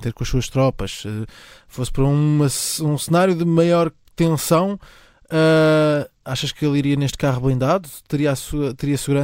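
No audible technical faults anywhere in this speech recording.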